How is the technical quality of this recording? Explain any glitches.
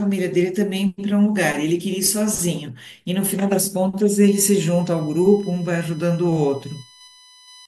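The recording has one clear fault: USB whine from about 4.25 s to 7.66 s. A steady 1 kHz tone series, strongest at 4 kHz, sits roughly 25 dB below the speech, caused by the bus's 1 ms frame current leaking through power or ground. Unlike mains hum, its pitch sits on 1 kHz multiples rather than 50 or 60 Hz.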